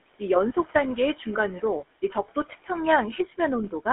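The speech has a buzzy, gravelly roughness from start to finish. It sits inside a narrow line band of roughly 250 Hz to 3.4 kHz, with nothing above it. This is the GSM full-rate codec. It rebuilds the voice from a vocal-tract model driven by coarsely spaced excitation pulses, and the result fits the 13 kbps full-rate mode. The damage is plainly audible rather than subtle.

Throughout the clip the background swells and sinks with the speech. These are noise suppressor artifacts. The suppressor judges frame by frame which frequency bands hold steady noise and pulls them down, here by about 18 dB in the pauses. The room noise, about 20 dB below the speech, is what it keeps pumping up and down.

From 2.02 to 2.69 s, parts of the speech turn faint and sound swallowed, as if briefly turned down along with the background. This is speech cut by the noise suppressor. It mistook some low-level speech energy for noise and attenuated it, by about 15 dB at the deepest point. 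The losses add up to only around a sixth of a second across that stretch.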